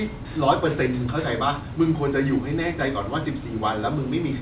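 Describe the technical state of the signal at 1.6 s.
At 1.6 s the signal is intact, with the speech carried cleanly through the call path and its content stopping at about 4 kHz, which fits a narrowband telephone codec.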